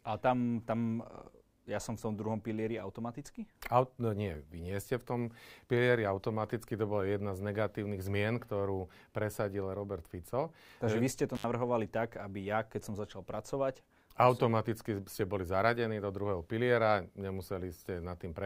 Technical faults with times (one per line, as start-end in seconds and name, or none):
11.35-11.44 intermittent contact